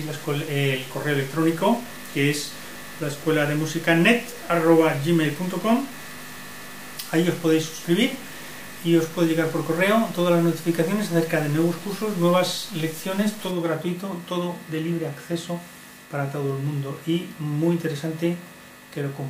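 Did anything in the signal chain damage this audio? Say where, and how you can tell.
Yes. From the start to 13.51 s the sound carries a grainy, buzzy distortion that follows the waveform, and the quiet stretches fill with noise instead of falling silent. After 13.51 s it clears. This behaviour is consistent with a stuck bit, likely at the converter or on a broken data line: one bit held at a fixed value shifts about half the samples by a step of roughly -35 dBFS, and that bit flips with the sign of small values, so silence turns to noise.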